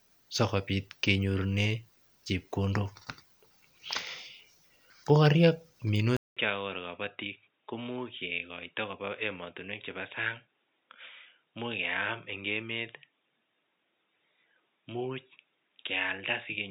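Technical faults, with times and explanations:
6.17 to 16.7 s, input switched to a poorer device: after a short gap of about 200 ms, the speech comes back duller and boxier, with nothing above 3.8 kHz, roughly 10 dB quieter, and with a faint new noise floor sitting well under the speech. It stays that way to the end. The likely cause is the recording input flipping mid-take to a narrower-band microphone or a headset call profile, which brings its own bandwidth, gain and background hiss.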